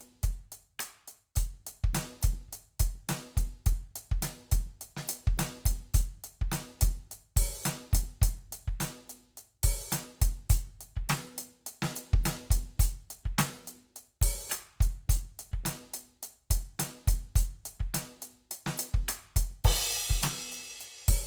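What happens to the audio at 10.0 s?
At 10.0 s the music sounds rough and grainy, as it does throughout, likely from Opus compression in CELT mode, noise-filling starved bands at a rate near 24 kbps.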